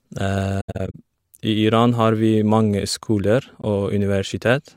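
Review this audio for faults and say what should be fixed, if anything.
AAC frame loss with muting occurs between 0.60 and 0.95 s, where about 213 ms of speech disappears in several holes, the longest around a tenth of a second. At 3.61 to 3.64 s there is a single 21 ms hole, about one frame. Each lost block is decoded as silence, and the overlapping windows fade the sound out and back in. The gaps have soft edges, unlike hard-edged dropouts. Adding error protection or retransmission on the AAC stream, or concealment that fills gaps instead of muting them, would prevent this.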